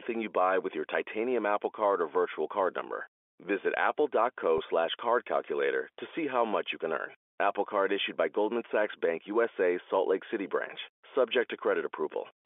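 At 4.58 to 4.60 s, just before "slash card calculator to", about 20 ms of the stream went missing, which fits a single lost packet. This is packet loss with pitch repetition: the receiver covered the gap by repeating the last pitch period of the voice. The sound is held for a moment with a buzzy, sustained quality before normal speech resumes. Around it, the G.711 telephone coding keeps the voice inside the 300 Hz to 3.4 kHz line band.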